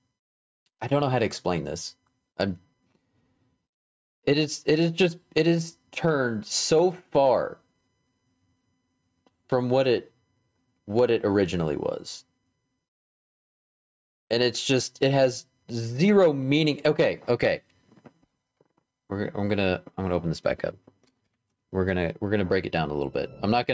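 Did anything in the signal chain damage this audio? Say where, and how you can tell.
Yes. Throughout the clip, the gain swings by around 10 dB, leaving the audio squashed. That is gain pumping, likely from input gain set far too high for the microphone, with a fast limiter clamping every peak. The call processing's band limit near 8 kHz is normal.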